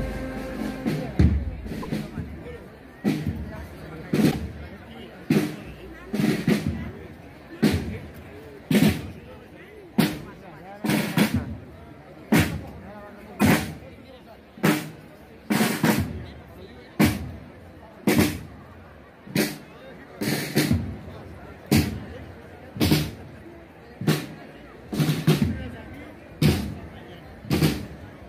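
Brief garbled glitches with a skip forward break the audio at 1.82 to 1.86 s, 4.30 to 4.34 s and 13.39 to 13.42 s. Each is likely a broken MP3 bit reservoir: after missing frames, the next 26.1 ms frames decode borrowed bits from the wrong data.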